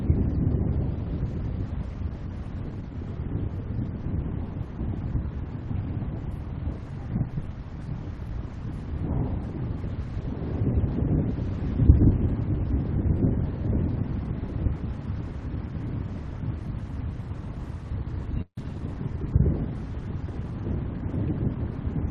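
At 18.41 s there's a call audio freeze lasting about 0.16 s. The last bit of sound gets stretched into a short fading buzz that drops to silence for roughly 80 ms before things pick up where they left off, likely because late packets drained the jitter buffer.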